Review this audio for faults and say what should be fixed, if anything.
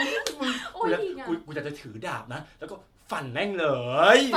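Generation loss throughout the speech: a swirly, hollow, smeared texture with blurred attacks and nothing above 19.8 kHz, likely from about five successive MP3 re-encodes at around 96 kbit/s. Keep intermediate copies lossless and encode to a lossy format only once, at the final stage.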